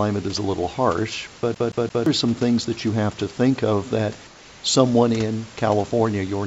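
From 1.55 to 2.06 s, after "is a little harsh", the CD is stuck on one turn. A 0.17 s piece of speech repeats three times, with a brief mute at each jump.

From 4.27 to 4.63 s, between "to think of that" and "someone in", the room background turns steady and featureless, about 3 dB quieter. This is likely comfort noise in place of the background.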